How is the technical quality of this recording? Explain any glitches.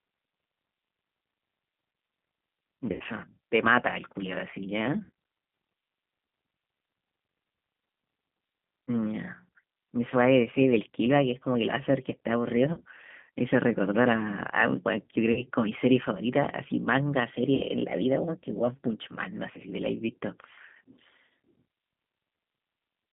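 The recording carries two faults: low-bitrate codec damage throughout the speech, and five brief dropouts patched over by the decoder.

The whole clip went through the G.729 codec at 8 kbit/s, which rebuilds speech from a vocal tract model, a pitch predictor and a few coded pulses per frame rather than sending the waveform itself. The line is limited to roughly 150 Hz to 3.5 kHz, so the sound is narrow and telephone-like. The codec damage is plainly audible as a slightly rough, synthetic edge on the voice.

VoIP packet loss concealed by the speech codec occurs at 2.92 to 3.03 s (80 ms lost), 5.04 to 5.10 s (60 ms), 12.73 to 12.81 s (40 ms), 15.32 to 15.41 s (40 ms) and 17.55 to 17.66 s (60 ms). When packets failed to arrive, the decoder kept extending its last pitch and filter settings while lowering the gain, so each gap is filled with a smeared, buzzy tone or coloured noise that fades. 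Each gap's length fits 20 ms packets, with two to four missing in a row. Because every frame is built on the previous one, the speech stays weak or distorted for a moment after each gap ends.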